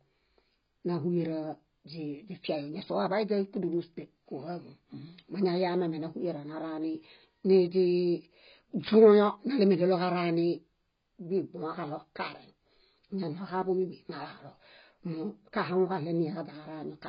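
Throughout the speech, a low-bitrate encoder has likely discarded detail, pointing to AAC compression at around 16 kbps. Nothing survives above 5.1 kHz, so the sound is dull and muffled, and the heavy quantisation smears consonants into a warbling, fizzy texture on sibilants.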